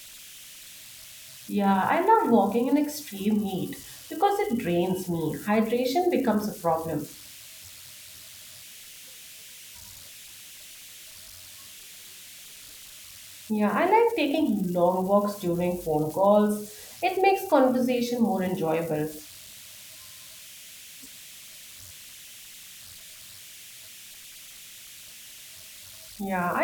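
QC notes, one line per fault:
Throughout, converter idle tones: undithered delta-sigma bit patterns repeat, leaving a whistle near 3 kHz about 22 dB below the speech, tonal unlike broadband hiss.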